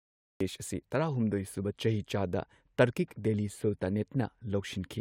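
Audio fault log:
0.00–0.41 s, cut-off start: the opening 0.41 s is flat digital silence, then the speech begins abruptly mid-sound, as if capture started a fraction late and caught the sound already in progress. With no natural onset or rising attack, the entry feels clipped rather than spoken. On a waveform this shows as a dead-flat line jumping straight into the speech; on a spectrogram, an empty band ending in a hard vertical edge of energy.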